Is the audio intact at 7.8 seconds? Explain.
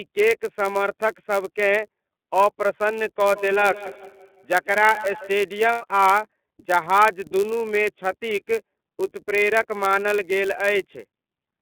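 No. At 7.8 seconds, as across the whole clip, the speech carries the iLBC codec. The band is confined to about 200 Hz to 3.5 kHz, and each 30 ms frame's excitation is coded on its own, which fits a rate near 13.3 kbps. The result is clear but plainly rough, synthetic speech. Unlike a wideband codec's smearing, nothing at all survives above 3.5 kHz.

There is also a block size mismatch (padded). Each block arrives slightly short, and its tail is zero-filled. These regular tiny gaps produce a steady buzz at 99.6 Hz, and the speech runs at 0.996 times its proper speed. This sets it apart from a dropped-sample mismatch, which would skip audio and run fast.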